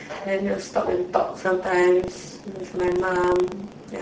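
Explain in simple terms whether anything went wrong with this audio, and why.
The speech was squeezed through the Speex codec at a low quality setting, leaving too little detail, so voices sound hoarse, grainy and noisy throughout.

From 1.96 s to the end, buffer tearing sets in: playback and writing fall out of step, splicing in slightly stale audio, causing a rattling buzz about 25 times a second.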